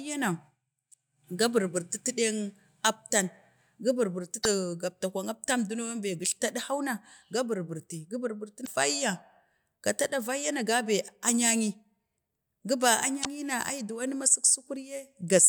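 At 4.41–4.46 s, 8.63–8.68 s and 13.21–13.27 s, damaged data in a compressed stream makes the decoder misread frames, producing brief glitches that show as 50 ms breaks in the waveform.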